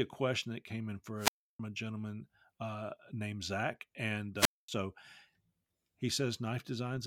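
Wireless microphone squelch dropouts occur at 1.17–1.60 s, after "question that came in", and 4.36–4.68 s. The radio signal fades, hiss rises, and the receiver mutes the speech for about 315 ms, then 233 ms.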